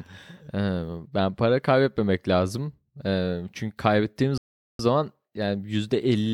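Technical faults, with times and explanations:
4.38–4.79 s, playback stall: right after "çünkü kaybettiğimiz" the speech cuts to silence for about 0.42 s mid-flow, then carries on. The likely cause is the player running short of data or its thread being blocked, leaving the output empty until it recovered.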